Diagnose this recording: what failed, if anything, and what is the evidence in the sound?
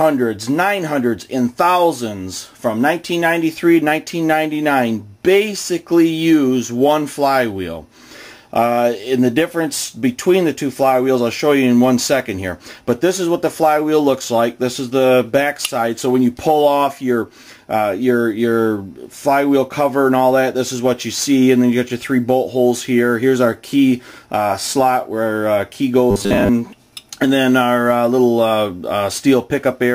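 From 26.11 to 26.49 s, a rigid 100 Hz buzz: robotic sound from repeated short buffers, likely a starved buffer looping 10 ms.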